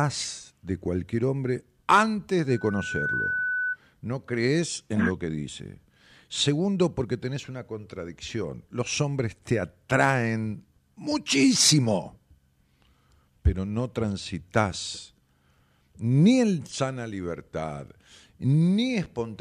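Loudspeaker feedback squeal appears from 2.50 to 3.77 s, just after "de cualquier hombre antes". A microphone is picking up the loudspeaker it drives, and around 1.5 kHz the gain around that loop has climbed above one, so the tone keeps reinforcing itself. It swells over about half a second into a steady, piercing whistle that reaches roughly the same loudness as the speech before the loop is broken and it stops.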